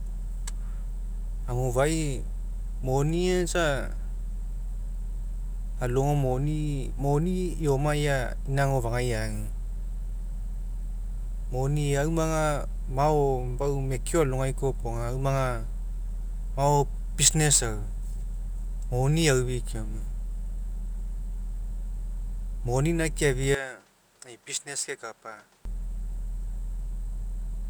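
At 23.55 s the speech abruptly changes character. Nothing above about 10.5 kHz remains, so it turns duller and boxy. The level drops by roughly 10 dB. A new background noise appears, well below the speech. There is no gap at the switch. At 25.65 s the fuller sound returns just as suddenly. The likely cause is an input switched to a poorer device mid-recording, with a narrower band, its own tone and its own noise.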